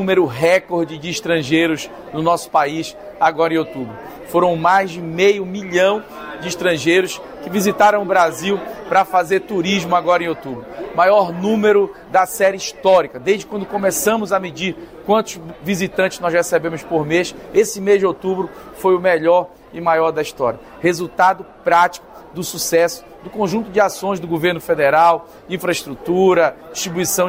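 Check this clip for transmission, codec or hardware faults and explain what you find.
I found no faults to report in this clip.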